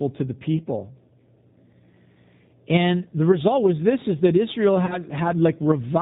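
Across the whole clip the speech carries plainly audible G.729 codec damage. Nothing above 4 kHz survives, and the sound is rough and faintly synthetic, which fits an 8 kbit/s G.729A stream. A simple low-pass filter would only dull the top, whereas here the texture itself is coarsened.

From 4.86 to 4.97 s comes VoIP packet loss concealed by the speech codec. About 30 ms of audio went missing, and the decoder stretched its last pitch and filter at falling gain, so the sound turns into a buzzy tone or coloured noise that fades. It then comes back weak or distorted instead of cutting to silence or clicking like a bare dropout.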